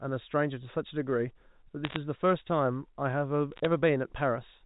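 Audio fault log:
1.84–1.96 s, bit errors on a digital phone line: bits in the 64 kbps G.711 A-law stream were flipped, at a rate of roughly one in a hundred. Each flipped bit corrupts a single sample. Flips in the sign or upper bits throw that sample far from its true value, so a tight cluster of sharp ticks crackles over speech that is itself unaltered and still band-limited below 4 kHz.
3.52–3.65 s, bit errors on a digital phone line: a second burst on the same line, at roughly a third of a percent. Fewer samples are hit, so the crackle is sparser, a scattering of isolated clicks rather than a dense spatter.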